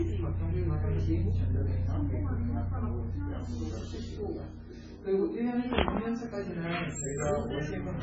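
Sounds. Throughout, the audio carries the coarse, smeared artefacts of a very low-bitrate MP3, likely low-bitrate audio saved at a high bitrate, which cannot restore the lost detail.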